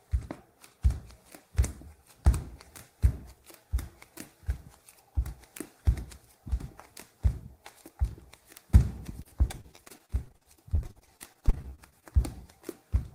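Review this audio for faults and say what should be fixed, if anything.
Repeated packet loss (robotic sound) runs from 9.23 to 12.04 s. Packets kept arriving late or not at all, and each hole was patched by extending the preceding sound. The dozens of short dropouts, up to 53 ms each, leave about 0.78 s of this audio concealed. Roughly 28% of the span is concealed, and the stretch sounds choppy. A larger jitter buffer plus forward error correction on the network link would prevent this.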